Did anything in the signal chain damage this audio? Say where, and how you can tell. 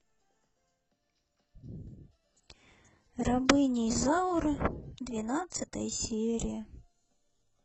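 Yes, it's the adaptive stream dropping to a lower bitrate, a network-side problem that shows up through the codec. At about 1.97 s the speech suddenly loses its clean top end and takes on a swirly, synthetic treble, with more codec artefacts through to the end. There's no gap at the switch, just an abrupt quality step. That fits the player moving from a 96 kbit/s AAC-LC rendition to a 12 kbit/s HE-AAC one, where the highs are rebuilt rather than carried.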